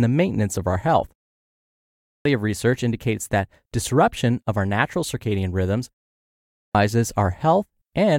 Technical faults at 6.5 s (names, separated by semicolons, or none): clipped start after a pause